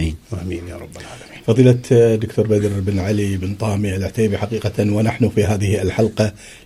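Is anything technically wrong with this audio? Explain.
No, nothing technically wrong can be heard anywhere in this audio.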